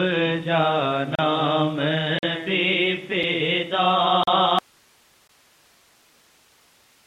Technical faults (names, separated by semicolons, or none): gap between stream segments; audio dropout to a faint residue